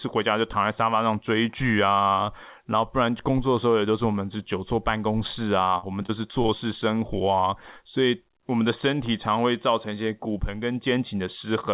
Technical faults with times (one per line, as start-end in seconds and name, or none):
5.78-6.50 repeated packet loss (robotic sound)